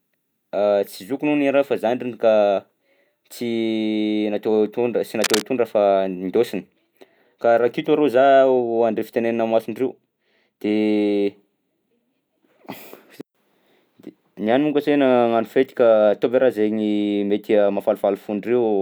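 At 5.22 s to 5.43 s, a burst of cable scratch noise sits just under the speech level: a dense, ragged scratching and rustling. The likely cause is a worn cable or connector being moved, its contact resistance fluctuating rapidly.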